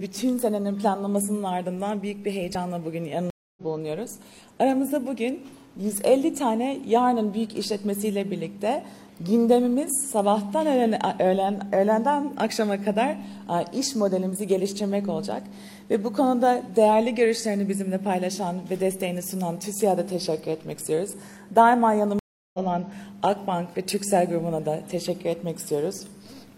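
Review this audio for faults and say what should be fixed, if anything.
Twice the sound cuts to silence and resumes a fraction of a second further on: 3.30 to 3.62 s (268 ms gap) and 22.19 to 22.59 s (347 ms gap). Each is a stream reconnect, where the connection dropped and a fresh decoder rejoined mid-stream. A larger client buffer with faster reconnection would prevent it.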